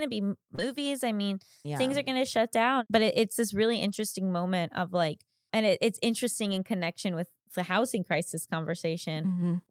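A speech recording with packet-loss damage from a call. At 0.55 to 0.60 s there is short concealed packet loss. About 20 ms of audio never arrived. The receiver extended the preceding sound for about 22 ms, then blended back, leaving a brief smear. Lost packets rebuilt from error correction follow. At 0.58 to 0.60 s, 20 ms sounds rougher, which fits one packet restored from a low-bitrate copy. At 3.88 to 3.98 s and 6.48 to 6.58 s, about 60 ms each turns grainy and noisy, consistent with three packets rebuilt per stretch.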